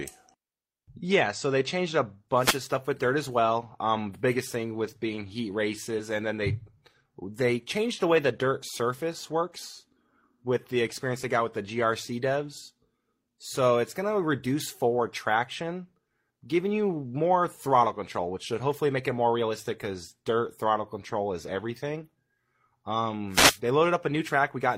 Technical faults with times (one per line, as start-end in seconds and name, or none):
2.34-2.63 wireless microphone noise hit
23.30-23.60 wireless microphone noise hit